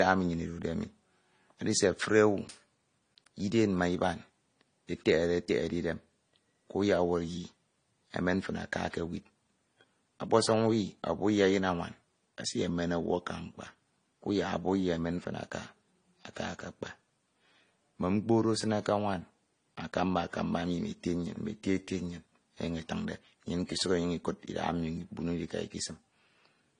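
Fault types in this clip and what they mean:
Transcoding between lossy codecs: The speech sounds dull above 10 kHz, with the artefacts of different codecs heard together throughout. This is likely audio encoded lossily and then re-encoded, the sound pointing to a low-rate MP3 followed by low-rate AAC-LC, with each stage's artefacts stacking.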